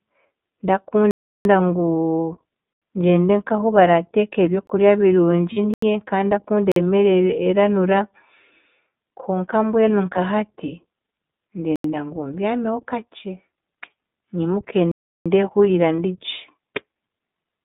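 The iLBC codec runs through the whole speech clip. It codes each 20 ms frame independently at 15.2 kbps within a 150 Hz to 3.7 kHz band, leaving the voice dull, slightly rough and plainly synthetic.

Blocks of digital silence, likely where the output buffer was not filled in time, first appear at 1.11–1.45 s (341 ms) and 2.73–2.82 s (85 ms), just before "ngyende nk'ahu barateeka". Another follows at 4.67–4.69 s. Each is a hard cut to silence. The 341 ms and 85 ms lengths fit 16384- and 4096-sample buffers.

Lost iLBC frames at 5.53–5.59 s (40 ms) are concealed by repeating the last pitch cycle with noise, giving a brief buzzy held vowel.

More silence blocks follow at 5.74–5.82 s and 6.72–6.76 s. A single lost frame then occurs at 10.14–10.18 s, just after "konka mbwenu", followed by further silence blocks at 11.76–11.84 s (before "ngu mbyameho kakye") and 14.92–15.26 s, and another single lost frame at 15.97–15.99 s.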